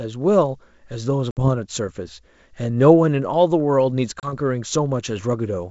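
Packet loss on an ADPCM call hits at 1.31 to 1.49 s, a 60 ms hole, and at 4.20 to 4.33 s, a 30 ms hole. Unlike a clean dropout, each silence is followed by slightly distorted speech while the decoder's predictor and step size resynchronise.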